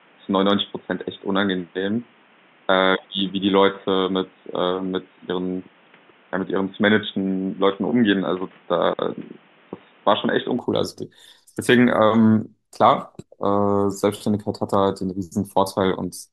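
From the start of the speech until 10.59 s, the band is cut off above about 3.7 kHz, giving a dull, boxy, telephone-like tone, and a faint background noise floor sits well below the voice. At 10.59 s the full bandwidth returns with no gap and no obvious jump in level. The likely cause is an input switched to a poorer device, such as a headset's call profile, carrying the first stretch before the better microphone took over.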